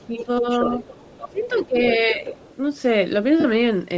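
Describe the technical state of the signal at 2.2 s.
At 2.2 s the speech is briefly suppressed in double talk, from 2.14 to 2.22 s. The level dips by roughly 5 dB, likely because the echo canceller turns everything down while both sides talk.

Under it, the other side's voice is leaking through, from 0.17 to 2.55 s. It sits roughly 15 dB below the speech, likely as residual loudspeaker echo the canceller missed.

Throughout, the speech has a grainy, breathy edge, likely from Bluetooth LC3 compression. The sound fits a low setting around 32 kbps with short 7.5 ms frames.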